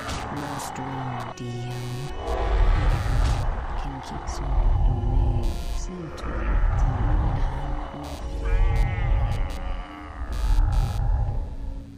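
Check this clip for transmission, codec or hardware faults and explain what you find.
One hardware fault is present: computer activity noise runs through the whole clip, a buzzing chirp pulsing around a hundred times a second and sitting roughly 30 dB below the sound. Shifting processor or peripheral load disturbs the shared ground, so the interference tracks computer activity rather than the audio. A spectrogram shows fine vertical striations spaced about 10 ms apart, and the waveform carries a low, ragged pulse train under quiet passages.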